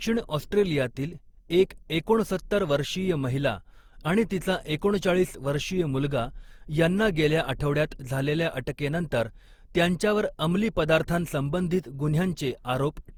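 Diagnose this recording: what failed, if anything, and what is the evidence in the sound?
Codec generation loss throughout: swirly, hollow speech with blurred attacks despite content reaching 20.2 kHz, likely from about seven Opus passes rather than one starved encode.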